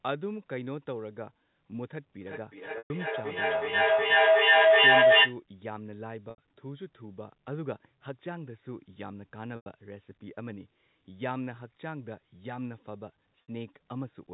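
From 2.22 to 5.41 s a feedback howl builds. Sound from a loudspeaker re-enters a microphone on the same call, gaining level on each trip. It settles near 700 Hz, pulses roughly every 400 ms, and peaks about 17 dB above the speech.

Packet loss with pitch repetition occurs at 2.78 s (120 ms, inside the howl), 6.30 s (80 ms), 9.56 s (100 ms) and 13.45 s (60 ms). The receiver repeats the last pitch period to cover each gap, giving a brief buzzy hold that fades toward silence before speech resumes.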